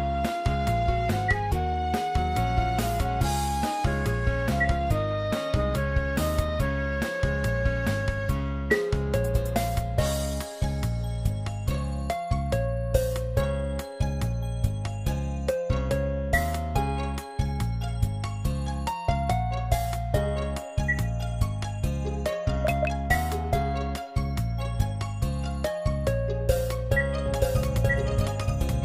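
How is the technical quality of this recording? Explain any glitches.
One glitch is audible near the end. From 27.26 s to the end, a doubled audio track appears: a second full-band copy, about as loud, trails roughly a second behind, likely from a slower capture path. The waveform shows overlapping duplicate shapes starting abruptly, with no decay.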